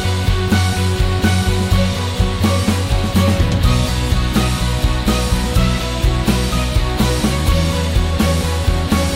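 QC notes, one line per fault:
No faults found.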